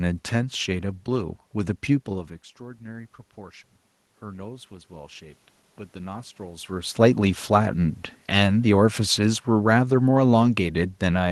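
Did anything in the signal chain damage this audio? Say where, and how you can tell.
Yes, in the call processing stage, where the automatic gain control misbehaved twice. At 4.19 s the level reaching the microphone dropped by about 19 dB. Between 4.19 and 5.49 s the automatic gain rose to compensate, adding about 4 dB over roughly a second. You can tell it's the gain stage and not the talker because the room noise swells along with the speech. Both climb together, which only happens when the whole signal is being amplified.

From 8.27 s to the end of the clip the automatic gain is falling. The controller judged the input too loud, or its background noise too strong for its gain, and began pulling its gain down gradually. The speech sinks steadily. Again the room noise sinks in step with the speech, which separates this from the talker simply moving away from the microphone. The slow, smooth slope is typical of an automatic gain control lowering its gain.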